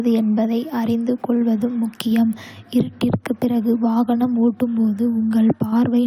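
Block size mismatch (truncated) runs throughout the speech. The stage writing the audio sends longer blocks than the next one reads, so each block's tail is dropped. This leaves a 43.1 Hz buzz, which fits 1024-sample blocks, while pace and pitch stay essentially normal.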